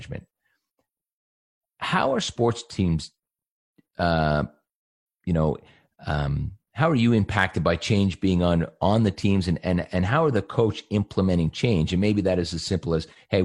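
Listening through the speech, nothing stood out as a technical fault at any point.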